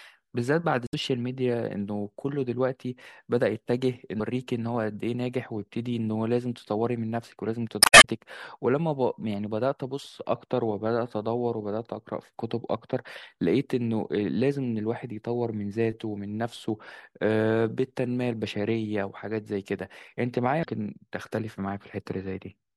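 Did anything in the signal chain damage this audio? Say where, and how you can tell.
Yes. Damaged data in a compressed stream appears at 0.85–0.94 s, 4.17–4.20 s, 7.79–8.05 s and 20.61–20.65 s, each a brief glitch cutting across the speech. The damage is at the codec or storage stage. Corrupted bytes in the encoded file make the decoder misread those frames and lose sync, so it outputs garbage until it locks onto the next valid frame header.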